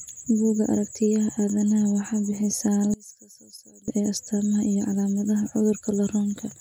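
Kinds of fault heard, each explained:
One channel inverted: the speech likely had one stereo channel's polarity flipped for a short stretch, so summing to mono cancels the shared centre content; from 2.94 to 3.88 s the voice drops by about 23 dB, leaving only a faint residue.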